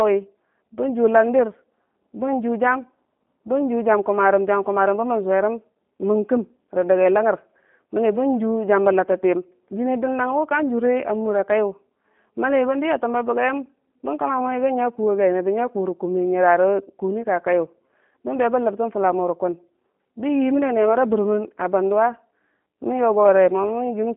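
From start to end, the speech carries G.729 codec damage. Nothing is heard above about 3.7 kHz, and the line band sits near 200 Hz to 3.5 kHz. Each 10 ms frame is rebuilt from a filter, pitch predictor and few pulses. Speech sounds plainly rough and synthetic, which fits 8 kbit/s.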